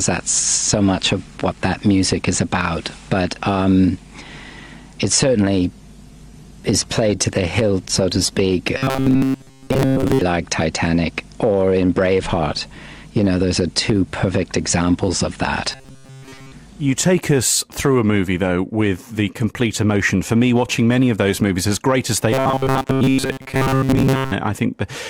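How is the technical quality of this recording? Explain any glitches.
The recording has two problems: a sustained drop in encoding quality in the first half, and three stretches of robotic buzzing later on.

The call bitrate drop runs from 5.62 to 10.33 s. The encoder's rate falls from 64 to 25 kbps and stays at its lowest for about 4.6 s. With far fewer bits available, the codec quantises the signal much more coarsely. The audio turns rough and watery through that span, then regains its clarity once the bitrate recovers at about 10.3 s.

The robotic sound from repeated short buffers appears at 8.77–10.22 s, overlapping the end of the bitrate drop, and again at 15.72–16.52 s and 22.32–24.32 s. Each stretch carries a rigid metallic buzz at 133 Hz that still loosely follows the sound's contour. The likely cause is late-arriving audio being padded by replaying the last short chunk, which fits a roughly 7.5 ms buffer. 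Most of the genuine audio in those stretches is skipped.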